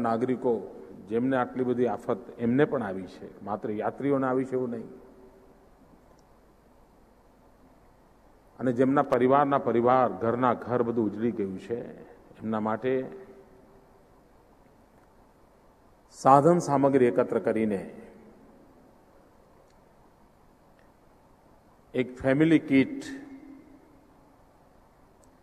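At 9.04 s a burst of loose connector crackle breaks into the audio, lasting until about 9.14 s, roughly a tenth of a second. It is heard as an irregular scratching crackle. A worn or dirty contact somewhere in the signal path is intermittently making and breaking as it shifts, so the signal is chopped on and off at an uneven rate, and any DC present on the line turns each break into a pop.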